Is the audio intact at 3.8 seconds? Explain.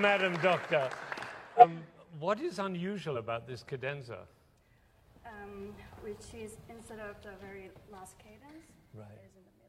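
Yes, the audio at 3.8 seconds is intact, with no fault present at that moment.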